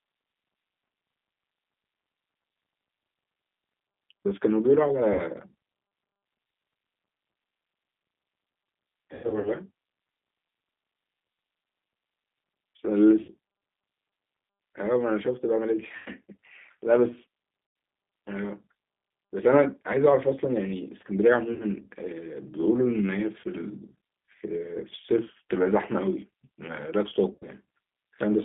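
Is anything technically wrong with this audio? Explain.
Yes. Throughout, the G.729 codec, likely G.729A at 8 kbit/s, rebuilds speech from a filter and sparse pulses inside a 200 Hz to 3.6 kHz band, leaving it plainly rough and synthetic.

VoIP packet loss concealed by the speech codec occurs at 5.13–5.24, 9.15–9.51, 13.22–13.31, 15.97–16.10, 17.67–17.76, 21.54–21.65, 23.41–23.44 and 27.33–27.45 s. Each time, the decoder stretches its last frame into a fading buzzy tone or coloured noise, and the speech stays weak briefly afterward. The 9.15 s stretch is the longest, with scattered gaps over about 0.3 s.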